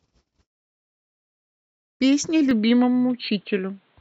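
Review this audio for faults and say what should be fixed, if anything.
Input switched to a poorer device, at 2.51 s and running to the end of the clip. The speech abruptly turns dull and boxy, with nothing above 4.4 kHz, while the level stays about the same and there is no gap at the change. A faint new noise floor, well below the speech, also appears at that moment. The likely cause is the system moving its input to another microphone or a headset's call profile, which passes a narrower band and carries its own tone and background noise. To prevent it, lock the recording input to a fixed device and disable automatic switching to headsets or call profiles during a take.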